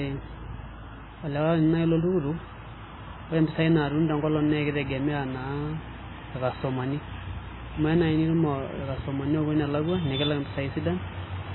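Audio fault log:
Throughout, MP3 compression: the speech has a heavy watery, swirly quality, with metallic chirps on s sounds and smeared attacks, and nothing remains above 4 kHz. The likely cause is an MP3 encoder running short of bits, consistent with a rate around 16 kbps. It discards weak frequency lines, which flicker on and off between frames, and removes all treble above a fixed cut-off, leaving the sound dull and unstable.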